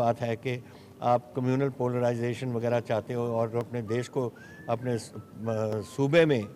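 Four single sharp clicks land at 2.62, 3.61, 4.77 and 5.73 s, each heard as an instantaneous tick that shows up as a thin vertical line across the whole spectrum. The likely cause is dropped samples: at each point a tiny stretch of the stream, about 0.7 ms, went missing, so the waveform leaps straight from one value to a later one. That abrupt step produces the click, while the gap itself is far too brief to remove any audible sound.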